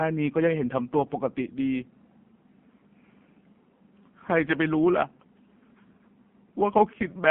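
From start to finish the speech carries the AMR narrowband mobile codec sound: a 150 Hz to 3.4 kHz line band, buzzy and synthetic from heavy coding consistent with a roughly 5.9 kbps mode. A spectrogram shows nothing above 4 kHz and smeared, blocky harmonics.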